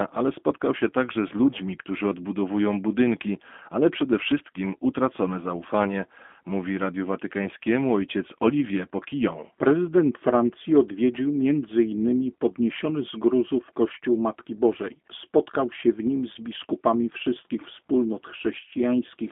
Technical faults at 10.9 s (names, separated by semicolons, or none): G.729 codec